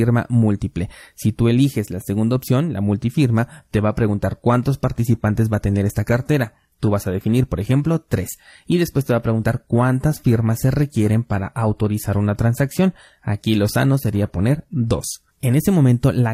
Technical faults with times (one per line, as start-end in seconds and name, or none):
3.53-15.53 adaptive stream at a lower bitrate